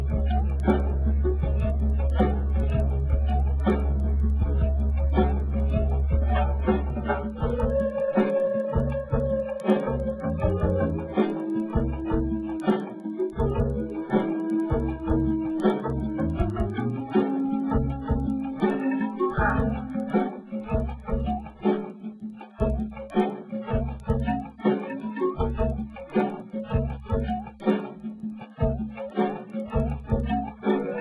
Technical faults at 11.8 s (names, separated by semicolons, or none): resampler restarted on every block